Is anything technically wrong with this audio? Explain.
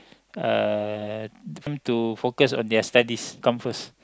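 Yes. At 1.67 and 3.42 s the speech skips abruptly, with audio missing between chunks: roughly a third of a second vanishes and the two sides butt together with no silence. The likely cause is chunked recording dropping audio at each handover, which fits 2-second chunks. Unlike a dropout, there is no gap of silence, only a jump.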